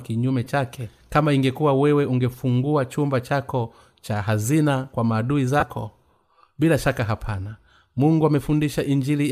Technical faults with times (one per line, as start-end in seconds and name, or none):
0.45-0.47 lost LE Audio frames
5.60-5.63 lost LE Audio frames